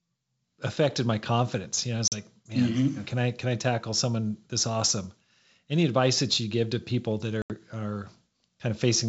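At 2.08 s, after "know I was", packet loss on an ADPCM call cuts a 40 ms hole. At 7.42 s, after "give to people that", an 80 ms hole follows. Each time, the decoder's predictor loses track and the speech returns slightly distorted.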